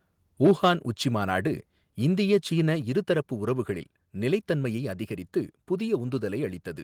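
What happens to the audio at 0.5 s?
A harsh, crackling edge hits the loudest syllables from 0.44 to 0.68 s, just before "உச்சிமாநாடு இந்திய சீன இருதரப்பு". This is microphone overload. The peaks run about 3 dB past the converter's ceiling and a few percent of samples get flattened, likely from an input gain set too high.

At 0.51 s the speech and background drop together by about 2 dB in a single step, right inside that distorted stretch. This is the microphone volume stepped down, likely the call software reacting to the clipping by cutting the device's input level.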